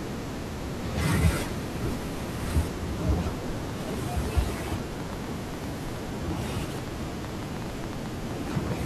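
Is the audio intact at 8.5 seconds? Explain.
No, 8.5 s falls inside a train of clicks running 3.48 to 8.73 s: irregular ticks, about 7.4 per second, likely interference, popping roughly 5 dB above the speech.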